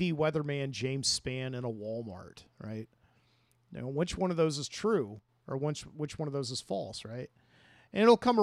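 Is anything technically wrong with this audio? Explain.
Yes. From 5.19 s to 5.29 s the speech level falls abruptly by about 6 dB for roughly a tenth of a second, then snaps back. This is most likely one channel dropping out: if one side of a stereo signal goes silent and the two sides are summed to mono, the content shared by both channels halves in amplitude. The result is a brief dip in loudness with hard edges at both ends.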